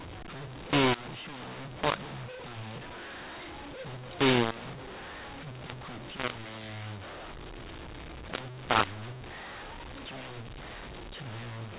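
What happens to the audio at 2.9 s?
At 2.9 s the speech is harsh and distorted from a mu-law and A-law mix-up that runs through the whole clip. A-law bytes are read as mu-law, scrambling levels and lifting quiet samples, so pauses hiss, unlike the faint level-tracking noise of ordinary G.711 coding.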